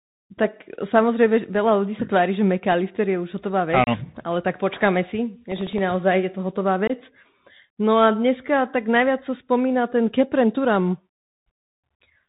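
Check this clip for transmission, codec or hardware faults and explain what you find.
Three kinds of fault are audible in this speech clip: a Bluetooth headset codec running throughout, two packet dropouts and one burst of processor crackle.

Bluetooth CVSD headset codec, throughout: the audio is coded as one up-or-down bit per sample with an adapting step, which fits a 64 kbit/s CVSD link. Everything above 4 kHz is gone, a granular hiss sits under the speech, and sibilants sound scratchy where loud high content outruns the step.

Unconcealed Bluetooth headset packet loss, at 3.84 to 3.89 s and 6.87 to 6.91 s: several short voice packets between headset and phone never arrived and were filled with nothing. The result is holes of 30 ms and 22.5 ms with abrupt edges, and the speech returns briefly quieter.

Processor overload crackle, 5.52 to 5.78 s: the processor missed about ten audio deadlines in a row, with buffers of under a millisecond. 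Each miss repeated a scrap of old audio with hard edges, so the passage carries a gritty tearing crackle that stops once the load clears.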